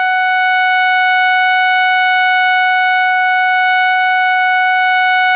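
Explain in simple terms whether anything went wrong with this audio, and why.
Nothing went wrong with this music; it simply sounds like it came over a phone call, which is why the highest sounds are missing.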